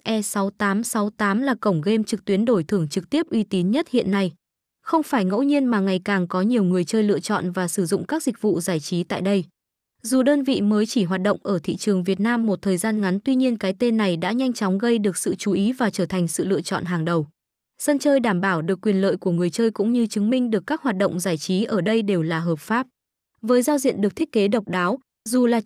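No technical faults can be heard anywhere in the speech. Nothing in the recording calls for a timestamp or further comment.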